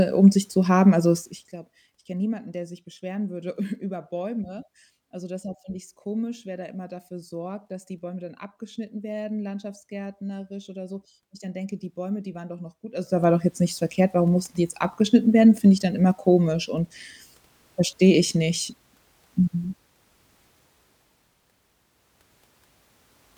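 A speech clip with zipper noise, twice: a ticking, zippy rasp from 1.17 to 1.58 s as the level drops by roughly 15 dB just before "ich kenn niemanden der", then from 12.91 to 13.27 s as it comes back up after "waren doch noch gut". The gain moves in unsmoothed 1 dB steps, around fifty a second, and each step clicks.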